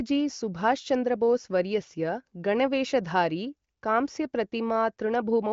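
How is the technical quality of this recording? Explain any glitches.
No glitches can be heard in the recording. The speech carries the band-limited sound of AMR wideband (HD Voice) coding, with nothing above about 7.5 kHz, and its clarity fits the codec's highest rate, around 23 kbit/s.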